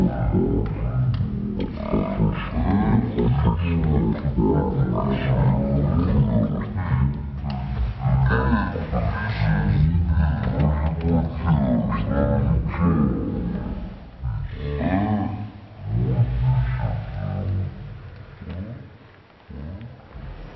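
From start to end the clip has a wrong sample rate fault. Everything runs at 0.363 times normal speed and sits 17.6 semitones lower, which fits 44.1 kHz material played at 16 kHz. Unlike a pitch shift or time stretch, speed and pitch drop together.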